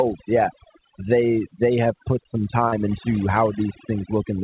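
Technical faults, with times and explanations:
Throughout, overdone noise removal: aggressive suppression mutes bands near the noise estimate, leaving a lowered background broken into twinkling specks, unlike steady band-limiting.
2.68–2.75 s, short concealed packet loss: after "they have put some", about 40 ms went missing and was filled by extending prior sound, a brief smear rather than silence.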